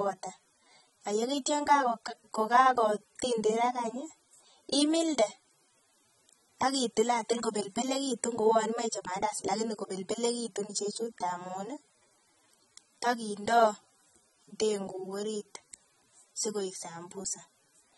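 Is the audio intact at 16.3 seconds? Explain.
No. At 16.3 s, as throughout the clip, the speech shows AAC compression damage: nothing above 11.6 kHz, with dull, smeared tone and fizzy, warbling sibilants. This is likely from AAC-LC quantising its spectrum coarsely, which fits a low bitrate near 24 kbps.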